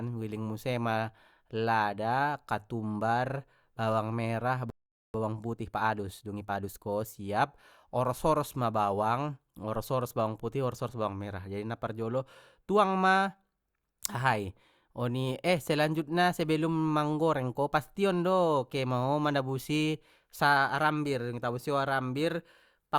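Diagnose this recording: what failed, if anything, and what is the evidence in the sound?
The speech cuts out from 4.70 to 5.14 s, a silence of about 0.44 s. This is a playback stall at the buffer stage. The likely cause is the player running out of data or its thread being blocked. The speech then resumes mid-flow.

Straight after, from 5.14 to 6.90 s, the speech runs about 1.25 times too fast at normal pitch. This is time-compressed catch-up during playback. Small pieces are cut out and cross-faded to clear the backlog left by the stall.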